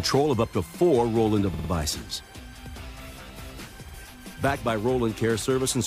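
At 1.53 s, repeated frames cause a stutter. A 52 ms block, which fits two compressed frames, plays three extra times until 1.69 s. At 3.88 s the same fault recurs once, adding 52 ms.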